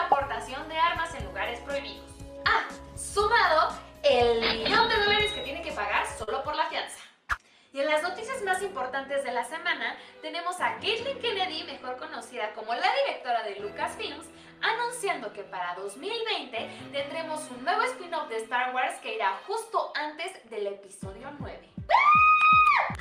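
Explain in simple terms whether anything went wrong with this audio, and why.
Around 6.23 to 6.29 s, 40 ms of audio arrived too late. This short concealed packet loss was patched by stretching the preceding sound, leaving a brief smear.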